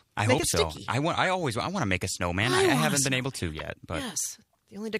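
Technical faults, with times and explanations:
1.25 s and 3.59 s, corrupt frame decoded: damaged compressed data got played anyway, so misread gains and codes dump energy at the wrong frequencies. You get a short error at 1.25 s, likely one frame, and a louder one at 3.59 s, maybe two frames.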